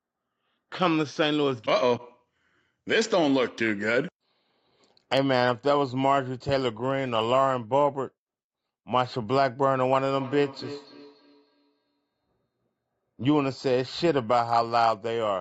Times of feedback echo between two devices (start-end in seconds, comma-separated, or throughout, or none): 10.15-12.07